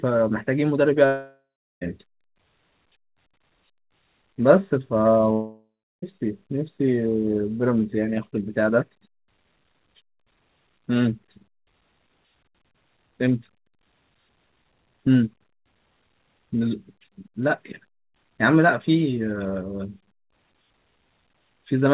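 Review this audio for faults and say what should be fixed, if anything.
A long network dropout, likely, interrupted the stream twice: from 1.06 to 1.83 s and from 5.33 to 6.04 s, each losing roughly 0.7 s of speech. With no audio arriving, the receiver stretched the last sound into a fading buzz, then gave way to about 0.3 to 0.4 s of near-silence before speech resumed with the gap missing. The G.711 A-law path, meanwhile, keeps nothing above 4 kHz. Add forward error correction or redundancy and a more stable network route to prevent such losses.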